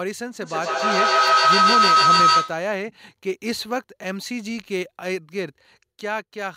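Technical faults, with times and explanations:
0.41–2.79 s, feedback howl: a tone of around 1.5 kHz rises out of the speech and peaks about 10 dB above it, pulsing roughly every 150 ms. Two devices on the same call in one room are hearing each other, so the sound passes from microphone to loudspeaker and back with net gain each trip. The repeats grow rather than decay, collapse onto the frequency the loop favours, and pulse at the loop's delay until the loop is broken.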